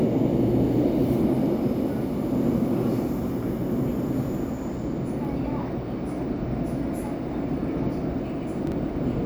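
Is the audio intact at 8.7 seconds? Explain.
No. From 8.67 to 8.72 s the chunks play out of order: one 11.6 ms chunk lands about three chunks late, giving a brief jumbled moment. Three abrupt discontinuities show in the waveform, with thin vertical broadband lines on a spectrogram.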